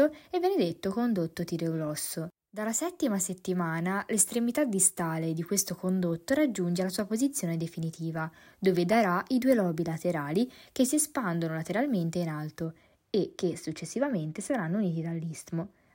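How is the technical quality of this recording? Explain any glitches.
The recording has one fault, near the end. From 12.65 s, right after "si espandono lateralmente in", to the end of the clip, de-emphasis has been applied wrongly. A treble cut meant to reverse pre-emphasis has hit speech that had no pre-emphasis, or has been applied a second time. The response tilts smoothly downward, about 10 dB lower at 10 kHz than at 1 kHz, so the voice turns dull and muffled. That gentle, continuous slope sets it apart from a low-pass filter, which would cut the top off more abruptly.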